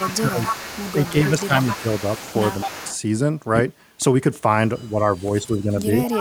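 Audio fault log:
0.00–2.97 s and 6.04–6.21 s, echo leak: a faint second copy of the speech trails the original by 263 ms, sitting roughly 10 dB below it, so phrases sound doubled with a short slap behind them. This is likely a loudspeaker-to-microphone path on the far end that the echo canceller did not fully cancel, so the residue of the played-back speech returned down the line after a fixed round-trip delay.
0.04–0.51 s, 1.11–1.53 s, 2.65–2.82 s, 4.93–5.00 s and 5.19–6.00 s, speech suppressed in double talk: the speech dips abruptly in level, about 10 dB at 0.04 s, 1.11 s and 5.19 s, up to roughly 15 dB at 2.65 s and only about 5 dB at 4.93 s. It ducks in patches of roughly 70 to 700 ms and then recovers. The likely cause is an echo canceller that could not tell the local talker from the echo while both sides spoke at once, so it attenuated everything together.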